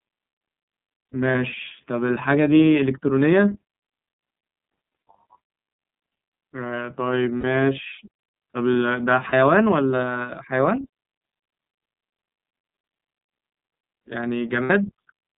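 Throughout, the speech passes through the iLBC codec, its sound consistent with the 13.33 kbps, 30 ms frame mode. The line passes only about 150 Hz to 3.7 kHz, so the voice is thin and muffled, with a plainly rough, synthetic edge.

Lost iLBC frames occur at 1.32–1.35 s, 7.40–7.44 s, 9.29–9.33 s and 14.63–14.71 s. The decoder repeats the last pitch cycle with added noise, so each gap sounds like a held, buzzy vowel before the voice returns cleanly.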